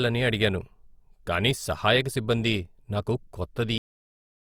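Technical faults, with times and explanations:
3.78–4.51 s, cut-off end: the speech stops abruptly mid-sound and drops to digital silence with no decay. The final buffers were never written or played.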